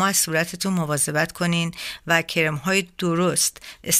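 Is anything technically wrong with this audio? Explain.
No, nothing is technically wrong with this audio.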